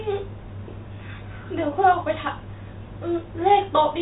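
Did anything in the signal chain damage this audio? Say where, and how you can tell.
No, nothing in the chain has damaged this speech; it carries the expected character of A-law G.711 telephone coding at 64 kbps, with the band stopping near 3.8 kHz and at most a faint level-following grain from the codec.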